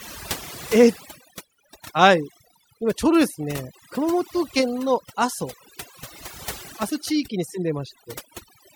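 A speech recording with overdone noise removal across its whole length. The noise reduction was set too aggressively: any frequency band sitting close to its noise estimate is pulled down hard or gated off entirely. Between phrases the background drops, broken by twinkling, chirpy specks where isolated bands flicker on and off. The quieter components of the voice are stripped out along with the noise.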